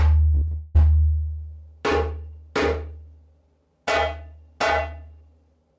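From 0.33 to 0.79 s, repeated packet loss leaves seven gaps, the longest 179 ms, each patched by repeating prior sound, giving choppy, robotic audio with pieces missing.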